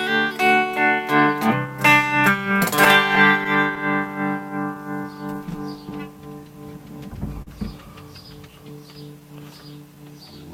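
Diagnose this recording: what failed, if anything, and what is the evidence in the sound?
The failure is in the network and jitter-buffer stage. The sender's clock is running slow relative to the receiver, by roughly 4 percent. That means packets arrive a little slower than they're played out, so the buffer keeps drifting toward empty for the whole clip. You hear it as a faint, uneven looseness in the timing from start to finish, rather than as one clean event. This is classic clock drift between sender and receiver.

Because of that drift, the receiver makes repeated timing corrections from about 0.02 s to 9.96 s. It keeps stretching or repeating tiny slices so it doesn't run dry. The net effect is playback at about 97 percent speed, with something like 300 ms of extra material spread across the clip. Each edit is small and they're unevenly spaced, so what comes through is a slightly wobbly, dragging tempo rather than distinct clicks.

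Between 2.85 and 3.78 s there are scattered short gaps. Around four packets went missing or showed up late there, and the receiver covered each one by extending the preceding sound. The patches add up to roughly 40 ms in total, and the longest is around 10 ms, so nothing actually drops out. In that window the concealment comes through as brief smears or ticks.

At 7.42 s there's a short stall from a late packet. It runs to about 7.49 s. A packet wasn't ready on time, the buffer ran empty, and the receiver held the last sound for 43 ms until the packet arrived. It then carried on from the same spot, so nothing is lost; the delay just grows by 43 ms. Audibly it's a sound that hangs on a touch too long, with a slight buzzy dip.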